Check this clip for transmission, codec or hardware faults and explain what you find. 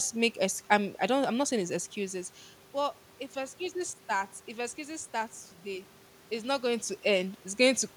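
One fault is present: periodic USB or driver dropouts. Right after "saying it's excuses but", from about 3.04 s to 7.03 s, around three ticks fall every 2.0 s. A background task stalls the audio path, and roughly a millisecond of speech is skipped, splicing the waveform into a click. Unlike random packet loss, the spacing is rigidly regular and no silent gap opens.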